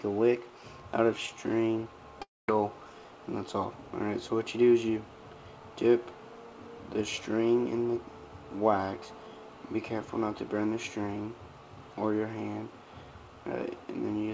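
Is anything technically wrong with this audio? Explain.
Yes. From 2.22 s to 2.49 s there is a long network dropout, likely from packets lost on the way to the receiver. About 0.27 s of audio never arrives. The receiver's concealment repeats the last sound as a buzzy, fading continuation, which decays into near-silence before the audio resumes, skipping the lost portion. The call path's band limit at 8 kHz, which points to G.722 at 64 kbps, stays present throughout.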